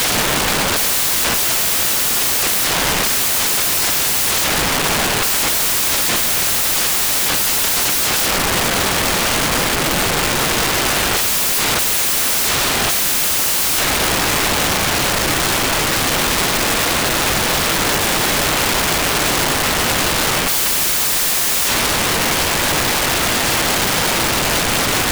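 From the first moment to the end, the clip carries a fault where the samples are built from the wrong bytes. The reader combined each sample's bytes incorrectly, through a byte offset, swapped byte order or a mismatched alignment, so the rapidly varying low bits now dominate every value. The result is loud broadband noise throughout. On a spectrogram this shows as energy smeared evenly across the whole frequency range, and the waveform appears as a dense, noise-like block without the shape of the original sound.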